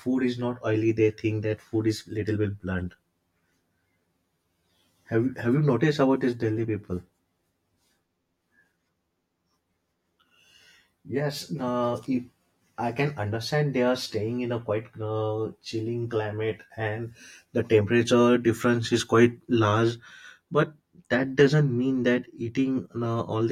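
Channel delay (comb filtering) runs throughout. One channel lags by about 10 ms before the mono sum. Notches from roughly 40 Hz upward make the speech hollow and phasey.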